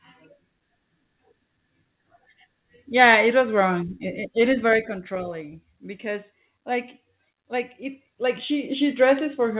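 A speech clip with zipper noise from 7.62 to 8.90 s. The level changes by about 10 dB there, but not smoothly. It moves in 1 dB jumps, around seven per second. Each jump leaves a small click, and together they make a ticking zip under the speech. The whole clip stops at 4 kHz, which points to a G.711 call path.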